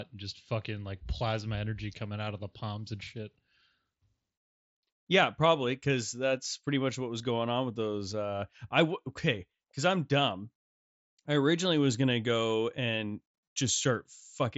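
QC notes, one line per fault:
No faults found in this clip.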